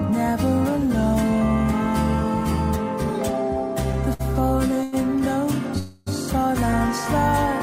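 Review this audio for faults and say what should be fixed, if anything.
Short stalls from a late packet occur at 4.13 to 4.21 s and 4.83 to 4.94 s. Each time a packet missed its playout slot and the jitter buffer emptied, so the receiver held the last sound for about 60 ms and then 90 ms, giving a slight drawn-out buzz. Playback then resumed from the same point, so nothing is lost, but each stall pushes the rest of the audio later by its own length.

A call audio freeze runs from 5.78 to 6.08 s. The sound hangs and smears into a fading buzz for about 280 ms without ever dropping to silence, then carries on where it stopped with nothing missing. The likely cause is a burst of packets held up in transit long enough to drain the jitter buffer, adding another 280 ms of delay.

To prevent both, give the jitter buffer enough depth to absorb the network's delay spikes and fix the congestion or routing that holds packets back.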